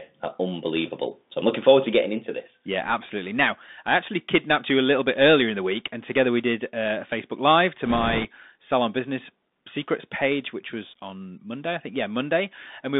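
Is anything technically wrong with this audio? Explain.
Yes, two faults. A Bluetooth CVSD headset codec runs throughout: the one-bit adaptive delta coding, which fits a 64 kbps stream, confines the speech to about 200 Hz to 3.7 kHz, adds granular hiss, and turns s sounds scratchy. Bit errors on a Bluetooth voice link occur from 7.86 to 8.25 s, just before "salon business secrets page". Flipped bits, at a rate of a few percent, each cause only a small step error, so they produce a rushing crackle rather than loud clicks.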